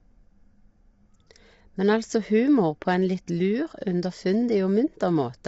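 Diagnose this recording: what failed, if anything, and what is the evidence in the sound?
At the codec stage, the speech sounds rough and grainy throughout, with noise filling the gaps between pitch harmonics and nothing above 7.7 kHz. That points to low-delay AAC compression, likely AAC-ELD at a bitrate around 24 kbps. Its short frames smear harmonics, which a plain low-pass filter would not do.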